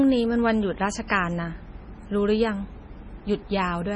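The speech sounds watery and swirly throughout, with nothing above about 10.5 kHz, a heavy low-bitrate sound that fits roughly 24 kbps. This is likely MP3 compression: short of bits, the encoder cut the treble and zeroed weak frequency lines, which flicker between frames.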